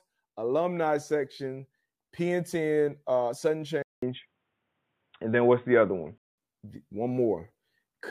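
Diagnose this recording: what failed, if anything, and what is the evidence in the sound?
At the driver stage, the input likely switched to a poorer device from 3.83 s to 6.38 s. After a 200 ms silence the speech turns dull and boxy. A spectrogram shows nothing above 3.8 kHz and a faint new noise floor, and the waveform shifts level by roughly 5 dB.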